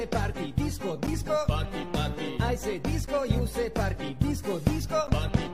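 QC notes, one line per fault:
1.07 to 5.08 s, periodic USB or driver dropouts: roughly 10 ms silent gaps every 2.0 s, heard as ticks; their strictly regular spacing indicates a blocked bus rather than random glitches.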